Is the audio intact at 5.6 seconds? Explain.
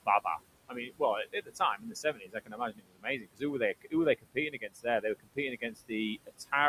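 No. From 5.56 to 5.92 s the speech turns faint and swallowed, dipping by about 18 dB, with roughly a fifth of a second affected in all. This is speech cut by the noise suppressor: it mistook part of the speech for steady noise and turned it down along with the background.

Around that moment, the residual background sinks and rises with the speech, and the speech can sound thin. These are noise suppressor artifacts: the suppressor cuts the steady noise by about 20 dB, frame by frame, so it sinks in gaps and rises under speech.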